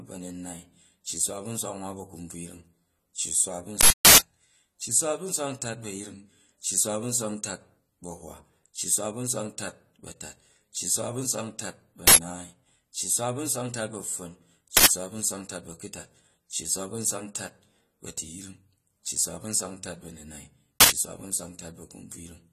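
From the start, the speech sounds dull and smeared, with nothing above 14.1 kHz. This is likely AAC compression at a low bitrate, around 32 kbps. The encoder drops high bands and coarsely quantises the rest, so codec damage is plainly audible throughout.

At 3.81 to 4.18 s, a burst of digital noise cuts in. This is an uninitialised buffer: a block was played before audio was written to it, so stale memory was heard as sound. Its 372 ms length fits a 16,384-sample block. Shorter bursts of about 93 ms follow at 12.07, 14.77 and 20.81 s, which fits 4,096-sample blocks.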